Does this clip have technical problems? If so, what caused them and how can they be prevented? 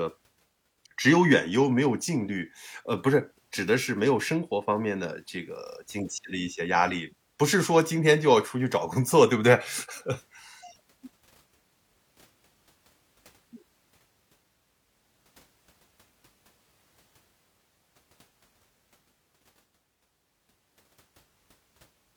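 No, this speech recording has no technical problems to diagnose. There is therefore nothing here that needs preventing.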